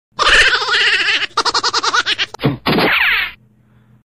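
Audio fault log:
No fault is heard anywhere in this audio, so the fault log has nothing to record.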